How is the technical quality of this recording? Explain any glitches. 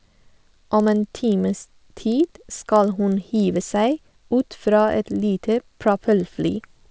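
The recording has one persistent fault: a regular ticking that runs through the whole 7-second speech clip.

The resampler restarted on every block. Each 40 ms block was converted separately, which fits a conversion from 44.1 kHz down to 16 kHz. Without its true neighbouring samples at each edge, the converter leaves a small error there. The result is a 25 Hz tick or buzz, present only while speech is sounding. On a spectrogram this appears as thin vertical lines spaced 40 ms apart. On a waveform it shows as tiny discontinuities at those same block edges.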